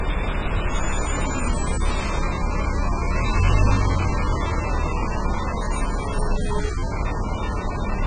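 Throughout, nothing reaches above 9 kHz and a fizzy warble smears the sound, likely heavy AAC compression; a simple low-pass filter would dull without warbling.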